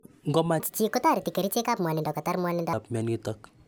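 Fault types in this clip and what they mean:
Wrong sample rate: from 0.60 to 2.73 s the speech runs 1.5 times fast and about seven semitones high, which fits 32 kHz audio played at 48 kHz.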